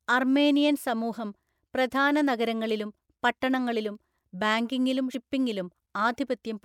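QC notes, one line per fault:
5.14 s, compressed frames skipped: just after "പ്രധാന നഗരങ്ങളിലും പട്ടണങ്ങളിലും ബാങ്കിംഗിലും", the decoder never plays a short run of compressed frames, either because they are missing from the stream or because it rejected them as corrupt. The speech jumps forward by about a tenth of a second, which fits about four frames of 26.1 ms each. The overlap between neighbouring frames blends the two sides of the gap, so the jump sounds like a brief smeared blip, not a sharp click.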